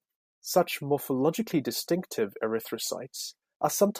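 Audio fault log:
1.47 to 1.52 s and 3.29 s, DAB burbling: Weak reception left a small residue of bit errors, around a tenth of a percent, that got past error correction into the MP2 audio data. Corrupted samples put short blips of noise into single sub-bands, here across eight frames in the first run and nine in the second. The result is a brief burbling laid over the speech.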